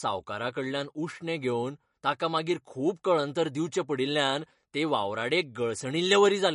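MP3 compression damage runs throughout this speech recording, likely from an encode at a low bitrate, with the sound fitting roughly 40 kbps. Weak frequency lines that the hearing model deems unimportant are dropped and return from frame to frame, so the coding damage is plainly audible as a watery, swirling texture over the whole clip.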